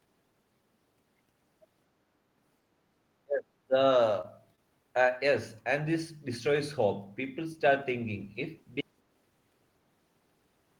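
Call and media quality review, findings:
Speech suppressed in double talk, 3.24 to 3.75 s: speech ducks by roughly 30 dB for about half a second. Likely echo canceller suppressing near-end talk while far end active.

Short concealed packet loss, 4.21 s and 4.56 s: brief smears, roughly 20 ms of audio missing each. Receiver jitter buffer or decoder concealment extends prior pitch or noise, filling 22 ms and 16 ms, then crossfades back.

Audio dropout to silence, 8.81 s to end: sound cuts off mid-flow to silence with no room tone. Likely capture input lost (device disconnect, link failure or mute) while recorder kept writing silence.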